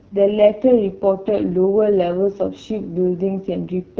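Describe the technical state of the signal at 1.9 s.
At 1.9 s the speech carries AMR wideband (HD Voice) codec damage, present throughout the clip. Speech is rebuilt from a pulse-excited vocal tract model, with shaped noise filling the top band. The damage is heavy: rough and raspy. It points to the lowest rate, around 6.6 kbit/s. Nothing sounds above 7.2 kHz.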